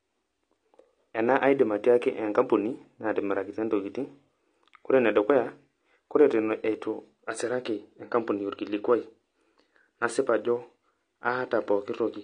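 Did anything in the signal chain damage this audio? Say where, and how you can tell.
Yes. At the codec stage, throughout the speech, nothing reaches above 9.6 kHz despite a file size that suggests a high bitrate. This is likely low-bitrate audio saved at a high bitrate: the earlier encoder's cut-off and artefacts survive, and re-encoding cannot restore what was removed.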